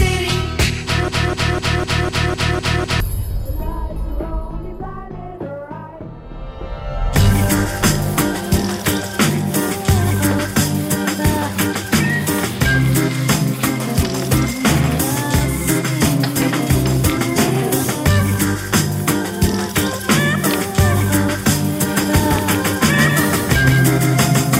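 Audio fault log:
1.08–3.00 s: broken-record loop. A 0.25 s fragment repeats exactly, back to back, eight times, and the audio that should have played in that span never arrives. The player or stream likely stalled and kept resending the last fragment it held.
21.88 s to the end: doubled audio track. A second full-band copy enters abruptly, trailing by roughly 150 ms at about 5 dB below the original, with no decay or room colour. The sound was likely captured twice, once through a slower path.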